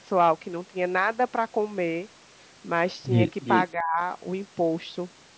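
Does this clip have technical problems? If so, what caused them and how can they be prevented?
Yes. Two faults can be heard in this speech clip.

From 3.42 to 3.66 s there is an echo leak. A second, delayed copy of the speech arrives about 351 ms behind the original. It is loud, only about 5 dB below the direct voice. The likely cause is a far end playing the call on a loudspeaker. Its echo canceller failed to remove what the microphone picked up and sent it back. Using a headset or a properly tuned echo canceller at the loudspeaker end would prevent it.

From 3.73 to 4.00 s the speech is suppressed in double talk. The voice dips sharply, by as much as about 25 dB at the deepest point. The drop lasts roughly a third of a second in total. Both sides were talking at once. The echo canceller likely could not separate the local talker from the echo and turned everything down. A headset, or an echo canceller with better double-talk handling, would prevent this.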